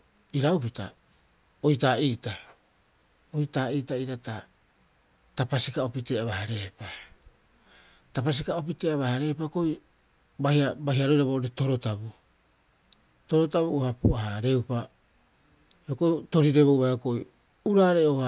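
No technical faults can be heard anywhere in it.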